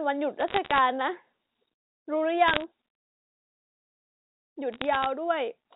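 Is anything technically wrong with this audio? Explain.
Yes. Sharp ticks and crackle sit over the speech from 0.40 to 0.79 s, 2.48 to 2.64 s and 4.72 to 5.06 s. These are bit errors on a digital phone line: flipped bits in the G.711 telephone stream each corrupt a single sample, and a flipped high-order bit, or a flipped sign on a loud sample, produces a sharp click.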